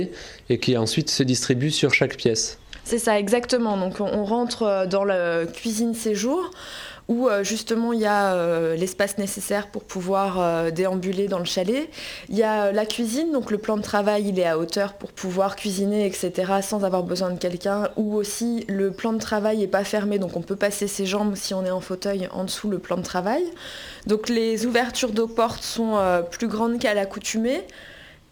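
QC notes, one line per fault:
5.44 s to the end: crude rate conversion. A gritty, inharmonic fizz rides on top of the sound, thickening on loud and bright passages and trailing them closely, sitting roughly 25 dB below the signal. Samples appear to have been repeated to stretch the stream from one rate to a slightly higher one, which fits a 44.1 kHz to 48 kHz change. With no interpolation or anti-alias filter, the repeat pattern creates spurious tones that bear no harmonic relation to the material.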